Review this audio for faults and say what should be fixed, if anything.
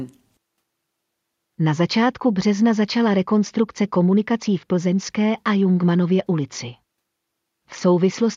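No technical faults can be heard in this speech recording. Nothing needs to be fixed.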